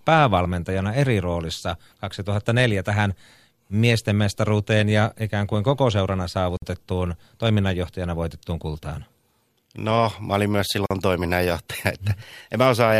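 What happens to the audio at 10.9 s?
At 10.86 s the speech drops out for about 44 ms, resuming at 10.91 s: a gap at a join of encoded pieces. The audio appears to have been encoded in separate segments and spliced without trimming, so the encoder's start-up delay and the padding of the previous segment's final frame both survive as silence. The gap opens and closes with its edges smeared by the codec, and the speech continues from exactly where it stopped.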